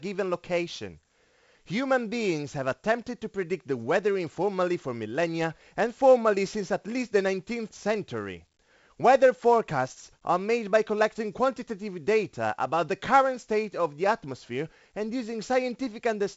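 The speech has passed through 4-bit ADPCM compression for its whole length. Each sample is stored only as a coarse 4-bit step from a predicted value, so the coding error rides along with the signal as a gritty hiss that rises and falls with loudness, heavy here on every strong syllable, with roughened attacks where the step size lags. Nothing survives above 7.7 kHz, which dulls the top end and fits a 64 kbps stream at a 16 kHz sample rate.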